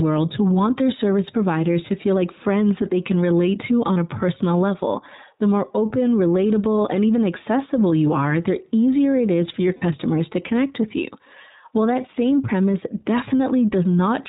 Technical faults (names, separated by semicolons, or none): iLBC codec; lost iLBC frames